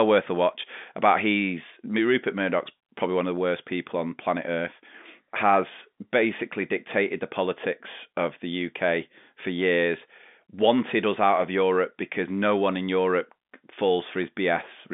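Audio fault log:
Nothing to flag here, just ordinary telephone-band speech through G.711 coding, with the sound sitting between roughly 200 Hz and 3.6 kHz and nothing above about 3.7 kHz.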